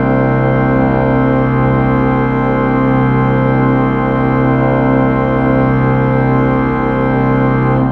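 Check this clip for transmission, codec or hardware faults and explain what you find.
Mains hum runs through the whole clip. A ground loop or nearby transformer couples the 50 Hz power line into the signal, leaving a steady low drone roughly 20 dB below the sound.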